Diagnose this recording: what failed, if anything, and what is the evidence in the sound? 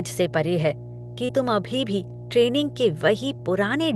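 Mains hum runs through the whole recording as a steady 60 Hz tone with low harmonics, sitting fairly high at roughly 15 dB below the speech. That points to the analogue wiring stage: a ground loop or a nearby transformer is coupling the power line into the signal path before conversion. Because it never varies with the speech, it can't come from processing or coding downstream.

Short concealed packet loss, a network-stage fault, appears twice: at 1.25 to 1.31 s and at 3.37 to 3.41 s. In each case a brief stretch of the call arrived too late or not at all, and the receiver covered it by extending the preceding sound, pitched if voiced, as shaped noise if not, before blending back. The first gap lost about 40 ms, partly filled. The second lost about 20 ms and left a slight timing shift, heard as a brief smear.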